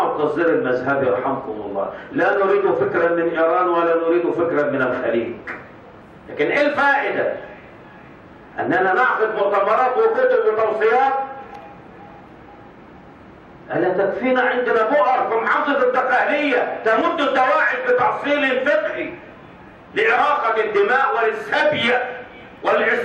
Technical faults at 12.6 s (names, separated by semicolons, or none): none